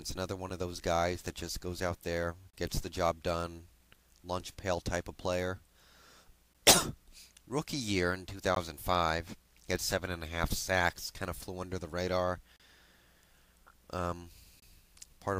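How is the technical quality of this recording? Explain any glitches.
The recording is interrupted by short, hard-edged dropouts, a gap between stream segments, at 0.49 s, 2.50–2.53 s, 6.53 s, 8.55 s, 12.56–12.60 s and 14.60–14.62 s. They fall on a 2-second grid, where consecutive segments' timestamps don't quite meet. The player fills each hole with silence, adding roughly 9 to 34 ms, so nothing is lost but the sound briefly stops. A waveform shows flat, near-silent slots with abrupt edges, and a spectrogram shows thin vertical blank stripes.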